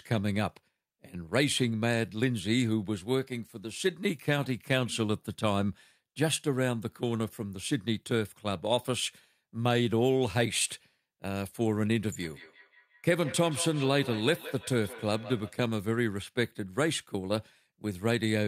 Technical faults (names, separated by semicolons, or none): feedback echo between two devices